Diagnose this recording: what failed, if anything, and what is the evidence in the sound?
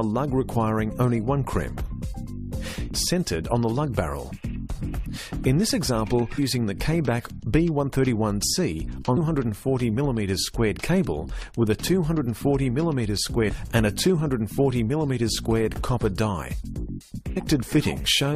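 The codec stage failed, with damaged data in a compressed stream: short glitches at 2.94, 6.37, 9.16, 13.48 and 17.36 s. Corrupt frames made the decoder misread them and hunt for sync. On a spectrogram each shows as a thin broadband vertical streak; the waveform shows a brief discontinuity.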